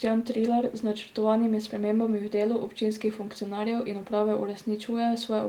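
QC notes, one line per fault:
No faults to note.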